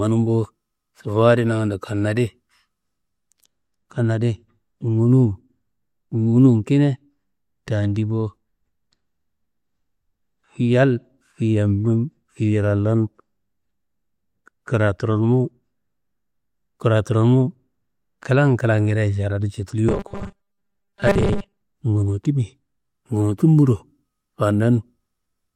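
From 19.89 to 21.61 s the speech turns into a rigid metallic buzz, the robotic sound from repeated short buffers, with a fixed pitch of 200 Hz. That fits a 5 ms block likely being looped while roughly half the real audio is skipped. A spectrogram shows evenly spaced horizontal lines at 200 Hz multiples, and the waveform shows identical short segments repeating.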